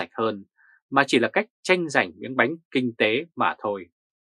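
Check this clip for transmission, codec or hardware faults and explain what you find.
Nothing in the clip points to a transmission, codec or hardware problem. There is nothing to report beyond that.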